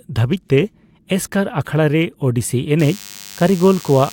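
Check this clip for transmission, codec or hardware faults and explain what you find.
One hardware fault is present. From 2.79 s to the end, a nearby DECT cordless phone's radio bursts every 10 ms are rectified, adding a thin 100 Hz buzz with many harmonics, roughly 20 dB below the speech.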